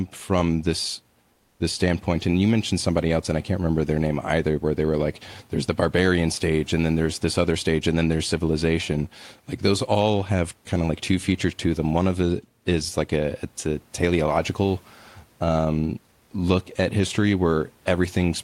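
From 1.33 to 1.59 s there's comfort noise in place of the background: the room noise turns flat and featureless, about 2 dB quieter, likely from discontinuous transmission.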